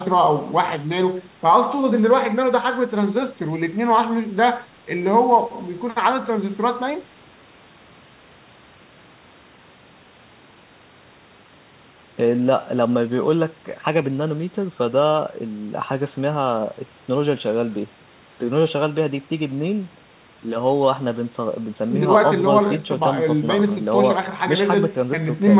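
No faults are audible in this speech; it comes over a call path whose band stops at about 4 kHz, which fits a G.711 mu-law narrowband codec.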